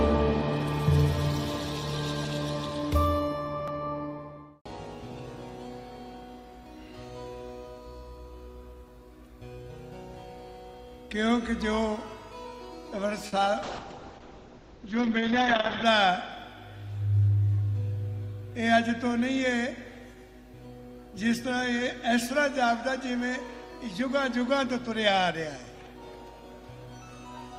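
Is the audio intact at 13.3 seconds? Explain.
No. From 13.27 to 13.34 s the sound holds with a slight buzz or dip: a short stall from a late packet, with about 50 ms stretched while the jitter buffer ran empty. Nothing is lost.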